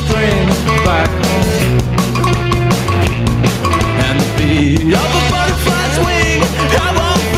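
Gain pumping runs through the whole clip. The level swings by around 10 dB, which squashes loud and soft passages toward the same level. This likely comes from input gain set far too high, with a fast limiter clamping down on each peak. On a waveform the envelope looks flattened, with the noise floor rising and falling; a spectrogram shows the background band brightening between loud events.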